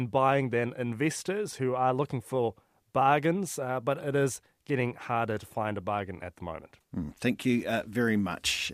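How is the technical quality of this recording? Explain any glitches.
No technical faults are audible.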